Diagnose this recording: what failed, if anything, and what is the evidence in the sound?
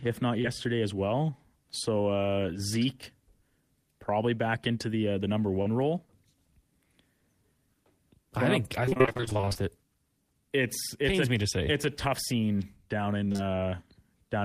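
The network path dropped audio, causing short concealed packet loss at 0.41 s and 5.62 s (after "the uh the number"). About 20 ms and 40 ms went missing, and the decoder continued the last sound into each hole before blending back into the real audio.

Repeated packet loss (robotic sound) follows "I think up I" from 8.86 to 9.60 s and "a tough scene down" from 13.24 to 13.40 s. Roughly half of each stretch is synthetic, with gaps up to 28 ms patched in quick succession. A spectrogram shows choppy striped blocks, and the waveform shows repeated, too-regular segments.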